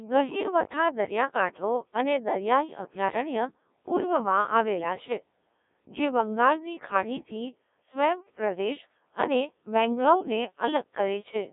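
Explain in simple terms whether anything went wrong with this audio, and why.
The whole recording has passed through a Codec 2 vocoder, a speech coder built for digital radio. It does not send the real sound. It sends only a rough description: pitch, loudness and the general tone of the voice. The receiver then rebuilds the speech from simple tones. That is why the voice sounds robotic and buzzy from start to finish. The damage is heavy, and nothing above about 3.8 kHz survives, so the sound is also thin and muffled.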